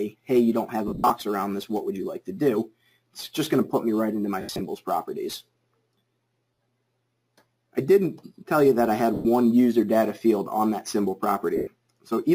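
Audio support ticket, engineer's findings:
Lost LE Audio frames at 0.88–1.10, 4.41–4.61, 6.54–6.58, 9.14–9.25 and 11.56–11.67 s. The LC3 decoder conceals each loss by replaying the last spectrum with random signs, fading it over longer gaps, so tonal content smears into noise. Losses total 40–140 ms per event.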